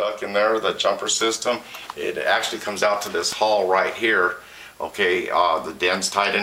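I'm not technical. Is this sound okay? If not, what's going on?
No. At 3.32 s there is an electrical switching spike. Something electrical nearby, likely a switch, a motor or a static discharge, made a tiny spark, and the audio wiring picked it up like a small antenna. That stray burst of electricity was recorded along with the sound, so you hear a single sharp snap, over in an instant and laid on top of the audio rather than part of it.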